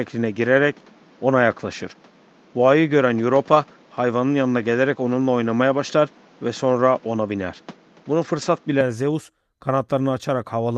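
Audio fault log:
0.0–8.81 s: input switched to a poorer device. The system was likely capturing through a weaker input, such as a second microphone or a headset's call profile, for the first 8.81 s and then moved to the better one. That device passes nothing above 7.6 kHz, so the sound is dull and boxy. It adds its own background noise, about 30 dB below the signal, and sits about 5 dB off in level. At 8.81 s the band opens out toward the call codec's ceiling near 12 kHz, with no silence at the switch.
3.51–3.57 s and 8.37–8.43 s: lost packet rebuilt from error correction. Each time, audio went missing in transit. The decoder filled the hole with the lower-quality copy carried in the next packet, so there is no gap. About 40 ms is rebuilt each time, which fits two lost 20 ms packets. Those stretches come through briefly rougher and grainier, because the backup copy holds less detail.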